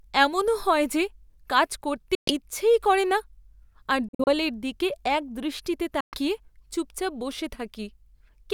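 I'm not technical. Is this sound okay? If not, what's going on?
No. The speech cuts out briefly three times. This is most likely a Bluetooth dropout, where sound data fails to reach the headphones in time. Silence appears at 2.15–2.34 s after "হয় যে কাজ করতে", at 4.09–4.32 s in short broken gaps before "দিকে একদৃষ্টিতে", and at 6.01–6.19 s after "দিকে একদৃষ্টিতে". Each time the speech picks up further along, as if it kept playing.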